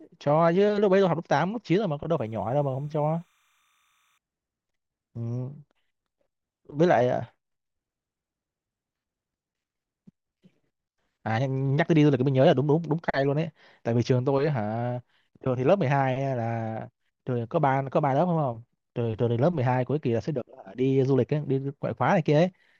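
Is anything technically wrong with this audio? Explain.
Yes. From 2.18 to 4.18 s, a faint timecode bleed sits behind the speech, roughly 45 dB below it. Linear timecode running at 30 frames per second on a nearby track or cable has leaked into the recording. Its square wave flips between two pitches around 1 and 2 kHz, producing a chirping warble. A steady whine or hum would hold a single pitch, but this sound keeps jumping between two pitches in a regular, frame-locked rhythm.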